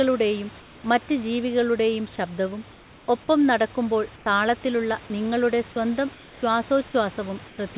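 Discontinuous transmission likely stopped sending during pauses, so comfort noise in place of the background fills 0.6–0.84, 2.72–3.08, 4.16–4.26, 6.14–6.42 and 7.48–7.58 s: steady, featureless hiss, about 2 to 4 dB quieter than the room.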